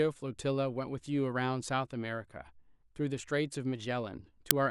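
At 4.51 s, file tags played as audio: embedded cover-picture data is read as samples, giving a brief very loud hiss, seen as a hard-edged broadband stripe.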